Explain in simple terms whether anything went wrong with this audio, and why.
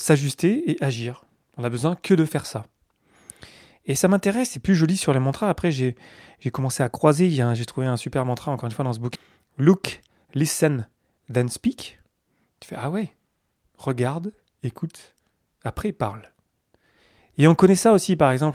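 Two things went wrong, both just past the middle of this speech clip.

First, a skip ahead at about 9.15 to 9.17 s, right after "une fois dans ce". Roughly a second of speech simply never plays. The receiver dropped that stretch, either lost on the way or thrown out because its buffer was overfull, and jumped straight to the audio waiting behind it. Nothing fills the gap, so the two sides butt together and the sentence lurches forward.

Then, from about 9.43 to 12.11 s, there's a jitter buffer speed-up. The receiver still had more audio stacked up than it wanted, so it trimmed out tiny slivers, each a pitch cycle or so, over and over. The voice keeps its normal pitch but runs at about 111% speed, sounding a bit rushed for those few seconds. All told, around 300 ms gets shaved off before things settle back to normal pace.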